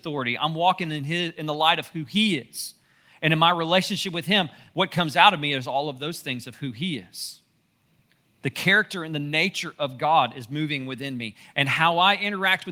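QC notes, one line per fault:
Nothing to flag here; this speech recording came through without any faults worth noting.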